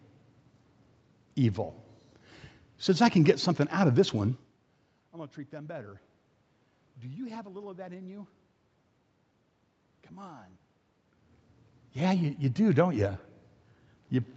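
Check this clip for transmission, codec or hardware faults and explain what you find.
Nothing stood out on listening to this clip.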